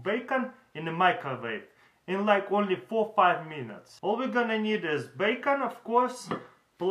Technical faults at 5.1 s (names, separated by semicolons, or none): none